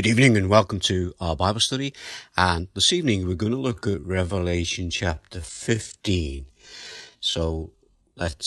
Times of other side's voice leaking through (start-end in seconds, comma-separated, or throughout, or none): none